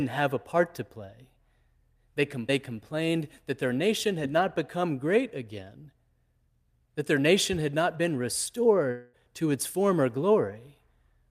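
From 8.91 to 9.15 s the speech turns into a fading buzz that carries on the last sound, likely a long network dropout that lost about 0.22 s before "to its former". A spectrogram shows smeared, decaying bands, and the waveform shows a shrinking, repetitive envelope.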